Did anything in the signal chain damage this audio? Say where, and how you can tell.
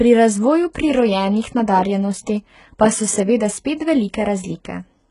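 Yes, at the codec stage: the speech has gritty, lispy sibilants and nothing above 11 kHz throughout, most likely HE-AAC compression, fitting a very low bitrate around 12 kbps, with treble rebuilt from copied lower bands.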